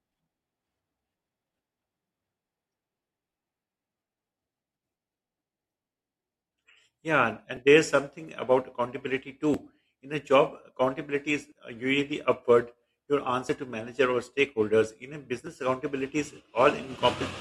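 A recorder or processor working in 2-second chunks likely drops a short slice at each handover, leaving audio missing between chunks at 9.54, 11.52 and 15.47 s. Each time, roughly 30 ms of speech vanishes and the edges butt together as a brief skip.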